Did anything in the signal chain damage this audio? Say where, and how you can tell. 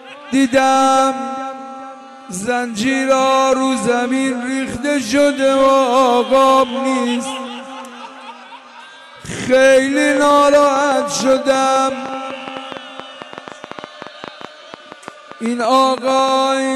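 Yes: a train of clicks from 10.17 to 16.29 s, around fifty uneven ticks at 8.5 per second, peaking about 5 dB above the signal, likely interference on the analogue wiring.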